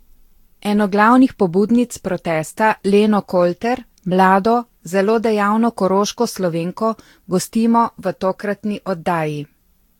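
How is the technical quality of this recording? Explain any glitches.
The recording is degraded by generation loss across its whole length. The speech sounds swirly, hollow and smeared, with softened consonant attacks, more damage than a single lossy encode at this quality would leave. The likely cause is repeated re-encoding, about seven passes, with a texture that fits Vorbis at around 70 kbit/s. Each pass requantised the audio on a shifted frame grid, so the errors piled up. A spectrogram would show holes and blotchy gaps in the upper bands, with nothing above 19.1 kHz. The waveform would show rounded transients.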